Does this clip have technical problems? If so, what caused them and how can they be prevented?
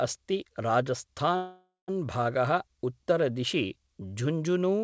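Yes. Call audio freeze, 1.36 to 1.91 s: likely packets stalled in transit and the jitter buffer ran dry. The decoder carried the last sound on as a fading buzz or hiss into about 0.19 s of silence, then resumed, delaying everything after by about 0.52 s. Prevention: a steadier network path or a deeper jitter buffer would ride out such stalls.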